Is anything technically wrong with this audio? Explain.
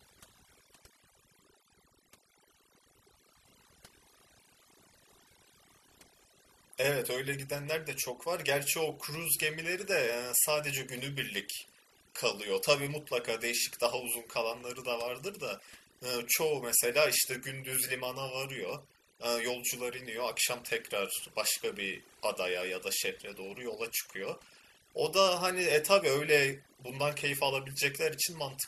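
Yes. Throughout this speech recording, overdone noise removal has been applied. A noise reduction stage set far too aggressively has been cutting individual frequency bands deep or silencing them whenever their level sat near its noise estimate, taking quieter voice components along. The background drops to near silence scattered with twinkling specks. Unlike a noise gate, which mutes everything at once, the damage here is frequency-by-frequency and constant.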